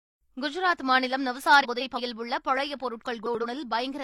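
Speech with frames out of order in two places. From 1.63 to 2.00 s, two adjacent blocks of about 171 ms swap places. From 3.26 to 3.45 s, two blocks of about 85 ms do the same. Each spot sounds like a garbled flutter. No time is lost.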